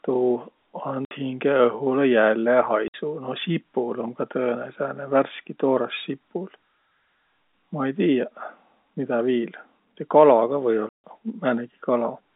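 Packets were lost and the receiver played silence in their place, leaving hard-edged holes in the speech: 60 ms at 1.05 s, 60 ms at 2.88 s, and 150 ms at 10.89 s. Those lengths fit 30 ms packets.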